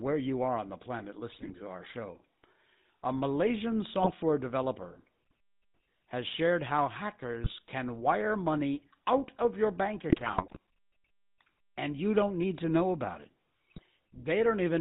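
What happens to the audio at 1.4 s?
Between 1.32 and 1.53 s, just after "are on the planet" and before "to our show", GSM bit errors corrupt the decoder's filter, pitch and gain values, producing squawks, pops and gargling. On a spectrogram this shows as smeared, misplaced formant bands and sudden level spikes in the waveform. Underneath, the GSM full-rate codec's pulse-driven vocal-tract model adds plainly audible buzzy roughness, with the spectrogram empty above 4 kHz.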